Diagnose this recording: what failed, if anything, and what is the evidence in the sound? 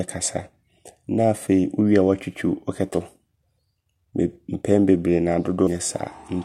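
The fault sits at the codec stage: damaged data in the compressed stream. You get two short blips in the speech, one at 2.94 s and another at 5.67 s, each a chirp, squawk, click or short hole that isn't part of the talker. What's going on is that bytes of the encoded file got lost, zeroed or overwritten, so the decoder misreads those frames, loses sync and hunts for the next valid frame header before playback settles again.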